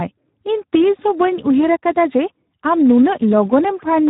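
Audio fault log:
Throughout, Speex codec at a low setting: the speech comes out hoarse, noisy and a bit robotic, since so few bits go to the excitation, which fits roughly 8 kbps. Nothing reaches above about 3.8 kHz, so it's dull and boxy too.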